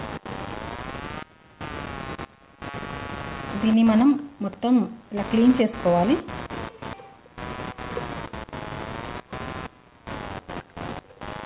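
A computer activity noise runs through the whole recording: a buzzy chirping pulsing at about 100 Hz, only around 15 dB under the sound, from processor or graphics load disturbing the audio ground. The call-codec band limit at 4 kHz is also audible.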